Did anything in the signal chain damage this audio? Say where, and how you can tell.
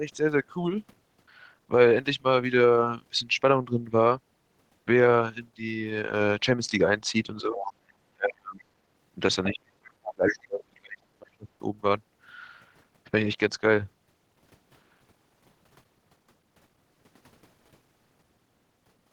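Yes. Speech suppressed in double talk during call processing, at 7.42–7.63 s (about 15 dB), then 8.13–8.6, 9.49–11.03 and 11.19–11.47 s (about 40 dB). The echo canceller likely ducked the talker. The waveform shows collapsed, notched envelopes.

The other side's voice is leaking through at 7.59–7.73 s and 10.03–10.14 s, about 15 dB below the speech. A spectrogram shows brief, faint, overlapping harmonic traces, likely from echo left in the microphone signal.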